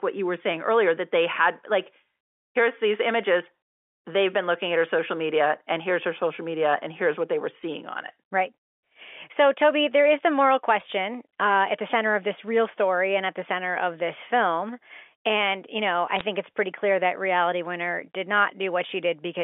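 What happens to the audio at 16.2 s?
Bit errors on the digital phone line corrupt a few bits in every thousand between 16.17 and 16.24 s, just after "you know" and before "it's pretty clear that". On this G.711 mu-law line each flipped bit distorts a single sample, and hits on the sign or high-order bits throw that sample far off its true value. The result is a brief cluster of sharp ticks and crackle laid over the speech, which fits a handful of damaged frames.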